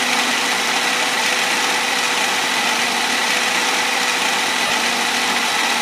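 At 4.67 s the sound briefly turns into a noisy smear for about 30 ms, its tonal detail washing out before the normal signal returns at 4.70 s. These are lost LE Audio frames: data went missing over the Bluetooth LE Audio link, and the LC3 decoder filled the gap by repeating the last good spectrum with randomised signs, which keeps the energy but scrambles the phase. The 30 ms gap fits three 10 ms frames.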